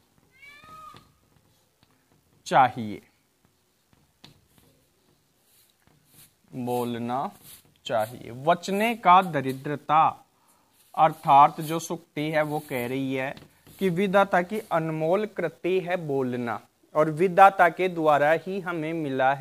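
From 13.01 to 18.73 s a fine hiss and grainy roughness ride on the sound, swelling on loud, bright passages and disappearing in quiet moments. This is sample clock jitter: the converter clock wavered by a few microseconds, leaving errors roughly 35 dB below the signal.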